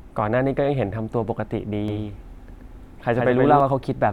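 A speech recording that was likely captured twice, once through a slower second path, carries a doubled audio track from 1.88 s to 3.60 s: a full-band copy trails roughly 150 ms behind, about 5 dB quieter, with no room decay, and it switches on and off abruptly.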